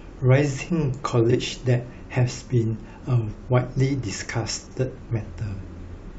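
At 1.30 to 1.36 s the speech stumbles with a brief garbled flutter: frames out of order. Two adjacent 23.2 ms frames were decoded in swapped order, which fits 1024-sample frames at 44.1 kHz. At 4.66 to 4.77 s the same happens with two-frame runs of 46.4 ms each, so the scramble lasts longer. Unlike a dropout or a repeat, nothing is missing or doubled, and the timing afterwards stays intact.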